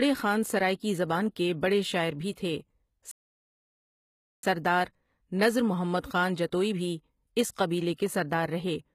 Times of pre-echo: 7.96-7.98

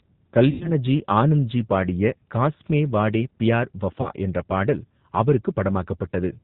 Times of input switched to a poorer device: none

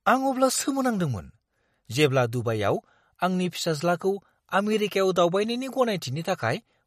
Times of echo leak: none

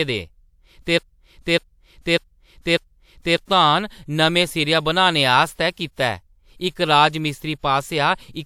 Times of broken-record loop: 0.98-3.37

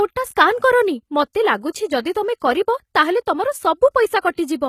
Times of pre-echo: 3.26, 4.21-4.24

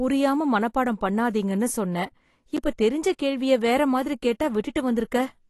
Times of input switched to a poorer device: none

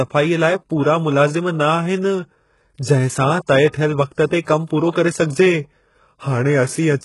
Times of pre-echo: 4.26-4.47

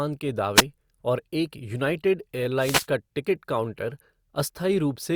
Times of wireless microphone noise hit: 0.55-0.63, 2.59-2.87

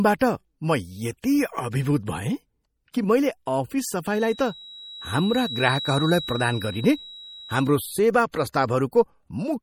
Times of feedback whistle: 4.06-7.75

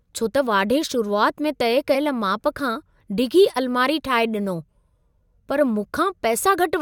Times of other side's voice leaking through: none

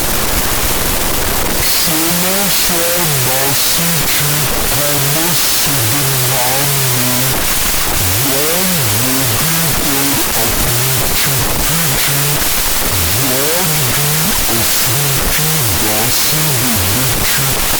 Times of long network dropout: none

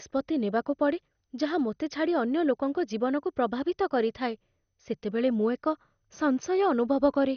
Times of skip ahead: none

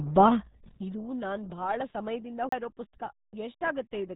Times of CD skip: 2.49-2.52

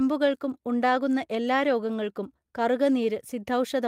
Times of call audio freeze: none

